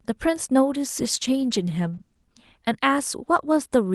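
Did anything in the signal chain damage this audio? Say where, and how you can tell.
Yes, at the codec, through a call bitrate drop. From 0.87 to 2.33 s the speech turns rough and muffled, which fits Opus falling from 32 to about 15 kbps.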